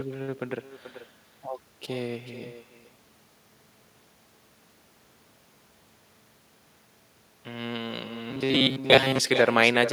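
With no echo canceller on the far end, the talker's speech returns from a loudspeaker into the other microphone and back across the network, so throughout the clip each phrase is trailed about 400 ms later by a thinner copy sitting about 15 dB below it.

From 2.52 to 4.20 s and again from 8.31 to 9.19 s, the speech turns into a rigid metallic buzz at 134 Hz, likely robotic sound from repeated short buffers, with fragments of about 7.5 ms looping in place of most of the real audio.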